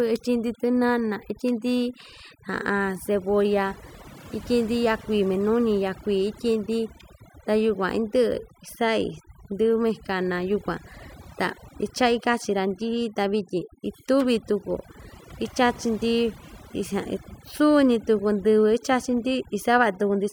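Overdone noise removal runs through the whole speech recording. A noise reduction stage was pushed far too hard on a noisy source, so any frequency band sitting close to its noise estimate gets pulled down steeply or switched off, and the softer parts of the voice are caught along with the noise. Between phrases the background collapses to near silence scattered with twinkling specks.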